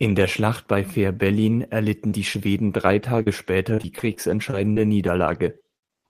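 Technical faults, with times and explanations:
2.09–2.13 s, short concealed packet loss: about 20 ms of audio arrived too late to decode. The receiver extended the preceding sound for roughly that length and then crossfaded back into the real signal. This leaves a brief smear or wobble in the speech.
2.11–2.13 s, 2.33–2.39 s and 2.46–2.48 s, lost packet rebuilt from error correction: at each point a 20 ms packet went missing. The following packet carried a low-bitrate copy of it, so there is no gap. Those frames play back rougher and noisier than the audio around them.
3.02–6.00 s, repeated packet loss (robotic sound): ten separate dropouts occur over this stretch, the longest 58 ms, with about 10% of the span concealed. Each gap is patched by continuing the last sound, and around 0.4 s more was rebuilt from error-correction copies. The speech sounds choppy.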